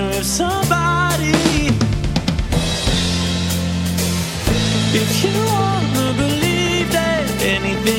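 At 6.21 to 6.23 s a single loud pop sits on top of the sound, peaking about 10 dB above the surrounding level, while the audio continues beneath it. The cause is likely a voltage spike from a plug, switch, static discharge or driver glitch.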